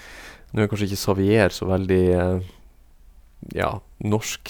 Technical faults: none

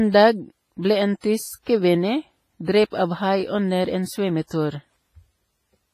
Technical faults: WMA compression; pre-echo

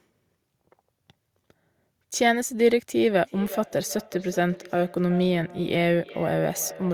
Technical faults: feedback echo between two devices

